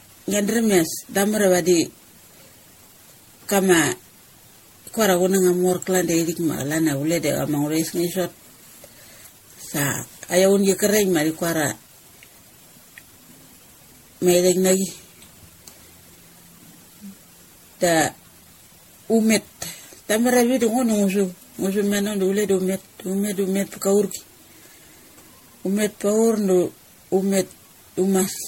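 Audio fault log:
Throughout: generation loss. The speech sounds swirly, hollow and smeared, with blurred consonant attacks and nothing above 16.5 kHz. This fits repeated MP3 encoding near 64 kbit/s, likely around ten passes, each requantising on a shifted frame grid so noise and spectral holes accumulate.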